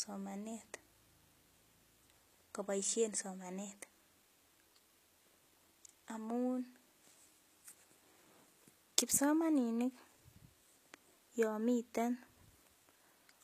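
Throughout, s sounds turn gritty and lispy, and nothing is heard above 14.9 kHz. This is likely HE-AAC compression at a low bitrate, near 20 kbps, with copied-up treble.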